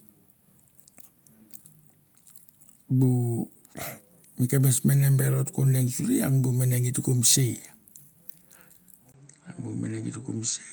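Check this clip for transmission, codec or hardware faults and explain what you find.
One fault is audible: an input switched to a poorer device, likely, from 9.12 s to the end. After a gap of about 20 ms, everything above 8.4 kHz vanishes and a faint new noise floor appears, at unchanged level. The brief silence and changed background distinguish a device switch from a codec's bandwidth reduction.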